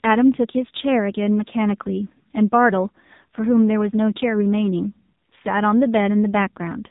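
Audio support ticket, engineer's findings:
AMR narrowband mobile codec, whole clip. Speech band-limited, nothing above about 3.8 kHz. Heavy buzzy, synthetic timbre. Component: AMR-NB encoder in the mobile path. Mechanism: 8 kHz sampling plus vocal-tract model excited by sparse pulses per 5 ms subframe. Damage level points to a low mode, fits roughly 6.7 kbps.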